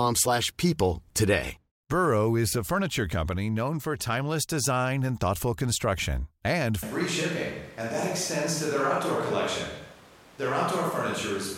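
The close microphone's feed likely dropped out at 6.83 s, just after "and thoughtful construction and", leaving the recording on a distant microphone. This is a switch to a distant microphone, and it holds to the end of the clip. The speech turns roomy and hollow in an instant and loses its bass. The level stays about the same, but room noise rises and sits roughly 25 dB below the speech.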